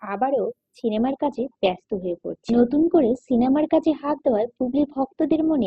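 At 0.97 s the sound switches abruptly, with no gap, to an adaptive stream at a lower bitrate, which fits a drop from 64 to 16 kbit/s Opus. On a spectrogram everything above 8.2 kHz vanishes from that point onward, and the treble turns dull.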